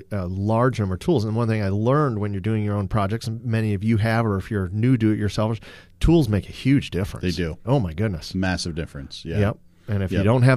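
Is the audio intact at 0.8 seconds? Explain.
Yes, at 0.8 seconds the audio is intact, with no dropout, glitch or other fault at that moment.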